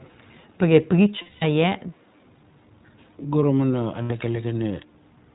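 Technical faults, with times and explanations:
throughout: iLBC codec. The speech is band-limited below 4 kHz and slightly rough and synthetic, which fits iLBC's 15.2 kbps mode with 20 ms frames, not a generic low-pass.
1.22–1.44 s and 4.02–4.11 s: lost iLBC frames. Gaps of 200 ms and 80 ms are filled with a held, buzzy repeated pitch cycle rather than silence. Clean speech returns immediately, because each frame decodes independently.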